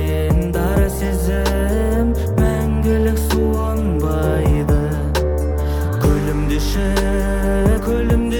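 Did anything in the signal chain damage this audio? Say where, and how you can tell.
Yes. At 5.51 to 5.54 s and at 7.78 s the sound leaps ahead. These are compressed frames skipped at the codec stage. Roughly three, then two, frames never played, consistent with 10 ms frames.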